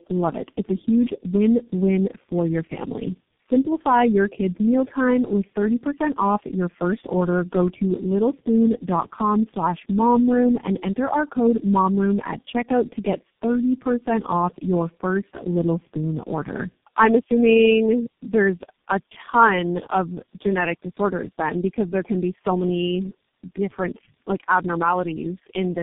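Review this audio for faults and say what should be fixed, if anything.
Tandem speech coding runs through the whole speech clip, from start to finish. The audio sounds rough, muffled and warbly, with nothing above 3.6 kHz, because the call was decoded and re-encoded at each network border, and each low-rate coder worked on the previous one's artefacts. The layered roughness points to about four speech codecs in series, likely AMR-NB, CVSD, G.729A and finally G.723.1. To prevent it, carry the call end to end in one codec using transcoder-free operation, or use a wideband codec across every link.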